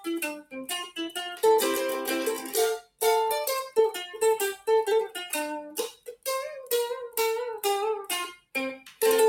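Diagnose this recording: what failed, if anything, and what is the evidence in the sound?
The culprit is call processing: a speech noise suppressor was left running on non-speech material. Across the clip the level keeps breathing by around 5 dB as the suppressor decides steady content is noise and pulls it down, so sustained parts pump and thin while attacks survive.

The same suppressor also produces sound cut by the noise suppressor in two places, from 2.82 to 3.02 s and from 5.92 to 6.27 s. Here it clamps harder, dropping the sound by about 16 dB and about 17 dB. Sustained or decaying material sinks abruptly there, with tails chopped short rather than fading naturally.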